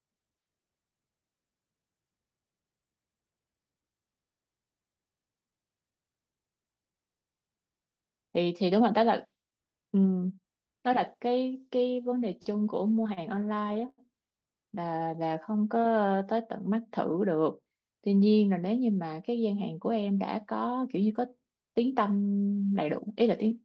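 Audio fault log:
12.97–14.00 s, repeated stalls (stutter): the jitter buffer ran dry 13 times, the receiver stretching the last sound for about 225 ms in total, longest 88 ms, so the sound drags and stutters without losing content; the call-codec path's 8 kHz bandwidth cuts off the highs.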